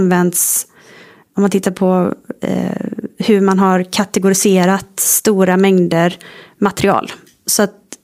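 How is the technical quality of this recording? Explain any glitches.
No technical faults are audible.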